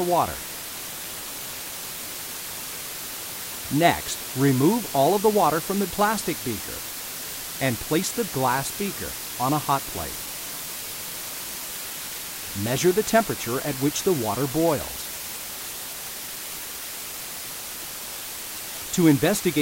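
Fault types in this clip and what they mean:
Low bit depth with dither: a steady, even hiss only about 10 dB below the sound throughout, with no distortion, which fits roughly 5-bit resolution with dither added before rounding.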